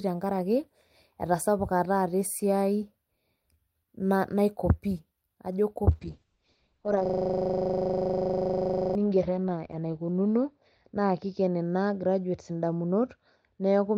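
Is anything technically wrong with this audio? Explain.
Yes, two faults are audible.

From 5.92 s to the end, a call bitrate drop occurs. The encoder's budget falls from 32 kbps to 7 kbps, so Opus codes more coarsely and narrows the band to 6 kHz. The sound becomes rough and muffled, with the lowest rate holding for about 2.9 s.

From 7.06 s to 8.95 s, a system hang loop occurs. The host stalled while the audio hardware kept replaying its ring buffer, so one 40 ms segment repeats about 47 times. This produces a steady 25 Hz buzz-like stutter.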